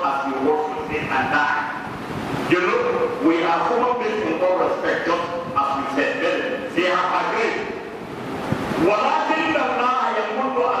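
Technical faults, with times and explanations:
No technical faults can be heard in this audio. There is nothing here that needs a time or an explanation.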